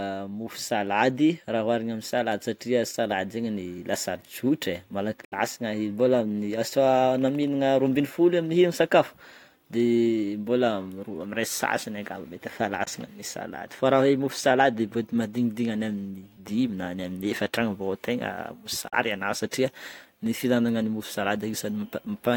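Short gaps of silence cut into the speech at 5.25 to 5.34 s, 12.84 to 12.88 s and 18.88 to 18.94 s, each one the likely result of a Bluetooth dropout. Audio packets arrived too late for the headphones and were discarded. The gaps of about 70, 23 and 46 ms fit whole frames of roughly 23 ms. Each sounds like a sudden stutter with nothing missing in pitch, and the speech resumes further along, as though it had kept playing. On a waveform these appear as flat, sharp-edged holes, and on a spectrogram as clean vertical blank bands across all frequencies.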